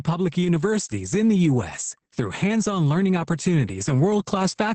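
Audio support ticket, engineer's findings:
Opus voice compression, SILK mode, throughout: bitrate starved (fits about 10 kbps), excitation coarsely coded, nothing above 8.7 kHz. Speech heavily muffled, hoarse, slightly robotic.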